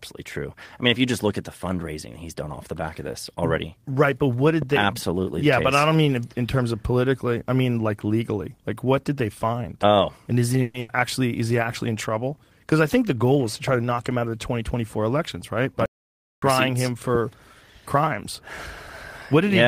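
Just after "but what", at 4.62 to 4.64 s, a single loud pop sits on top of the speech, peaking roughly 10 dB above it. It is likely a voltage step from a plug, switch or static discharge. Unlike a dropout or stall, the speech carries on underneath uninterrupted.

At 10.62 to 10.79 s a call audio freeze holds the last sound as a fading buzz or hiss for about 120 ms. The likely cause is delayed packets emptying the jitter buffer. When the audio resumes, nothing has been lost. The speech is simply pushed about 120 ms later, which is what separates a freeze from packet loss.

Straight after, from 10.80 to 10.90 s, a burst of packet loss produces a similar held, fading fill of about 90 ms. Here 90 ms of speech is genuinely missing, so the audio jumps ahead into "actually is he actually" rather than continuing where it stopped.

Between "I think the" and "elections right", from 13.35 to 14.99 s, a jitter buffer speed-up runs the speech at about 108% speed while the pitch stays the same. 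Roughly 150 ms is trimmed in small pitch-period pieces, so the speech sounds hurried rather than chipmunk-like.

From 15.86 to 16.42 s a playback stall cuts the output to complete silence for about 0.57 s, likely because the player ran out of data. There is no buzz or hiss fill, which distinguishes it from the freeze. The sound stops dead and then resumes.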